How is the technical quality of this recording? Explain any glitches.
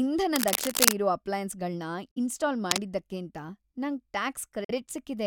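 The recording is marred by two kinds of glitch, each occurring twice: bursts of scratchy noise and short gaps of silence.

Cable scratch noise, 0.36 to 0.93 s and 2.66 to 2.82 s: a worn cable or connector being moved, likely, makes its contact resistance jump around. That adds dense, ragged rustling over the speech, a little louder than it in the first burst and about level with it in the second.

Bluetooth dropout, 2.11 to 2.18 s and 4.64 to 4.71 s: late packets were likely discarded before reaching the headphones. Each time about 46 ms of audio simply vanishes, leaving a hole before the speech resumes further along, as if it had kept playing.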